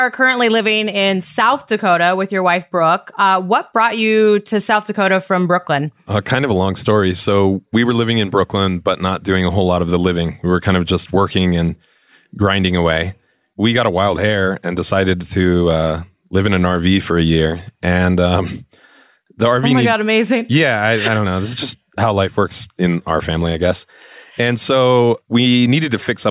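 No technical faults can be heard anywhere in the speech recording, and the signal stays continuous and steady throughout.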